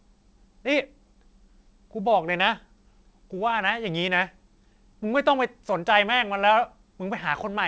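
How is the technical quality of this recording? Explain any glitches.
No glitches can be heard anywhere in this recording.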